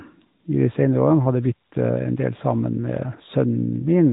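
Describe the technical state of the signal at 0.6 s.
At 0.6 s the speech carries AMR narrowband mobile codec damage, and it runs through the whole clip. The codec resamples to 8 kHz and rebuilds the voice from a vocal-tract model excited by a few pulses per 5 ms subframe. Nothing above 3.8 kHz survives, so sibilance and air are gone. The damage is plainly audible. The voice sounds boxed-in, buzzy and synthetic, which fits a mid-rate mode near 10.2 kbps.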